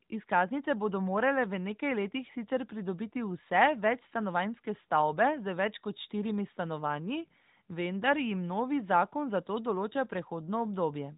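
Nothing goes wrong anywhere in this bit of speech, so there's no fault to point to.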